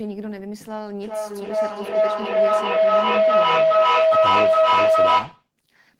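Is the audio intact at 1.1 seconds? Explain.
No. A rising howl near 700 Hz, pulsing about every 0.4 s and peaking about 13 dB above the speech, runs from 1.03 to 5.52 s: feedback howl, a microphone-to-loudspeaker loop gaining level each pass.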